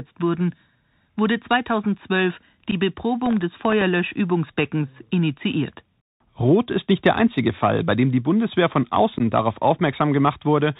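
The whole recording passes through a Bluetooth CVSD headset codec, and the damage is plainly audible. The codec sends one up-or-down bit per sample with an adapting step, which fits a 64 kbps link. The band stops at 4 kHz. Fast, loud high content outruns the step and smears, s sounds come out scratchy, and a grainy hiss sits beneath the speech. That steady, whole-clip texture separates it from the brief events that follow.

At 2.71 to 2.74 s there is unconcealed Bluetooth headset packet loss. About 11.2 ms of audio drops out, which fits a few of the headset's short voice packets going missing with nothing patched in. The result is a tiny hole with sharp edges that can click, and on this CVSD link the speech returns quieter for an instant. The same thing happens at 9.18 to 9.22 s, where about 15 ms is lost.

From 3.26 to 3.82 s there is processor overload crackle. The audio engine keeps missing deadlines on very small buffers of under a millisecond each, about fifteen times. 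Each time, it replays a scrap of old audio instead of fresh signal, and every hard-edged splice adds a tick. Together they form a gritty, tearing burst about half a second long. The packet-loss holes are single dropouts, but this is a dense cluster of tiny repeats that ends once the load clears.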